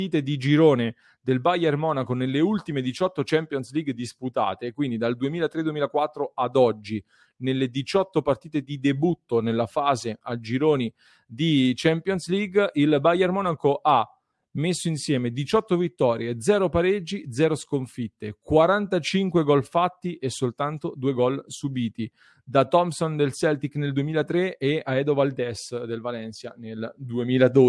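Listening to this recording of speech, nothing stood out as a technical problem at any point.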